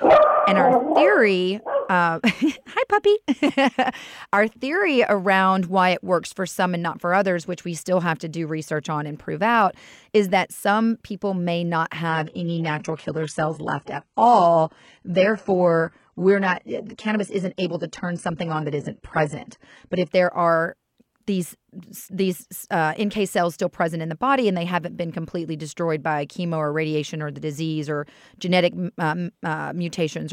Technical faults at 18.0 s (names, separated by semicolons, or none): adaptive stream at a lower bitrate